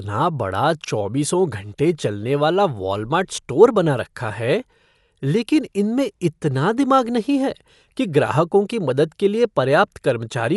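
Throughout, the speech is dull, cut off above 11.5 kHz, with rough, fluttering noise. Likely Dolby Digital compression, fitting a starved bitrate near 64 kbps.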